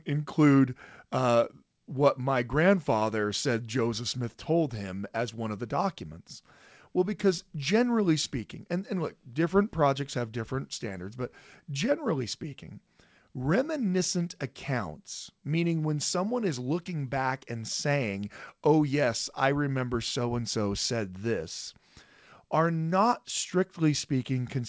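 No technical faults can be heard in this recording.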